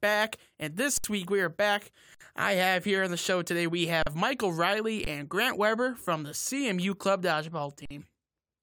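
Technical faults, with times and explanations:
0.98–1.04 s, 2.15–2.21 s, 4.03–4.07 s, 5.05–5.07 s, 7.85–7.91 s: underrun with held sample. The buffer ran dry for 20 to 65 ms each time, just before "week we are back", between "week we are back" and "I have here on", and after "the show today we". The converter held its last value, so the waveform sits flat. The sound stops with little or no click, and nothing is skipped, so playback resumes softly where it paused rather than jumping.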